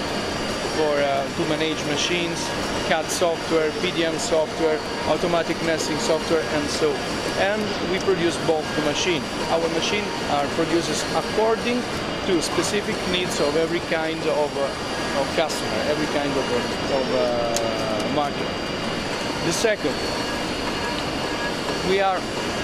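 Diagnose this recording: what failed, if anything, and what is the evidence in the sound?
A brief glitch at 9.45 s: damaged data in a compressed stream, where the decoder lost frame sync and resynchronised on the next header.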